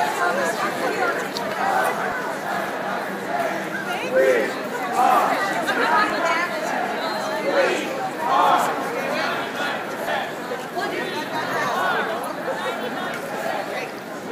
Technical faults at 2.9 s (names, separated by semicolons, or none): none